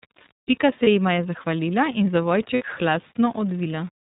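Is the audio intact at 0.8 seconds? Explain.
No, not quite. Right around there, from 0.84 to 0.88 s, you get lost iLBC frames: a dropout of about 30 ms, which fits a single missing frame. The decoder papers over it by repeating the last pitch cycle with some noise mixed in, so it comes across as a brief held, buzzy vowel. The sound snaps back right away, before "jima je zahvalila in".

That moment also carries the iLBC codec damage that runs through the whole clip. Nothing above 4 kHz gets through, and the speech has that slightly rough, synthetic edge. It's plainly audible here, and it points to the 13.33 kbps mode with 30 ms frames.

There's also a grainy, signal-following grit underneath. That's low bit depth without dither, likely 7-bit rounding, with the error sitting only about 25 dB under the speech, so quieter bits sound especially gritty.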